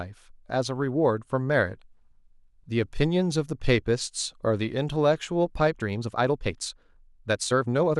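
A time-stretched section runs from 5.64 s to the end: the pace jumps to about 1.48 times normal while pitch holds steady, sounding rushed. Software likely squeezed this stretch to fit a length, dropping short pieces to preserve pitch.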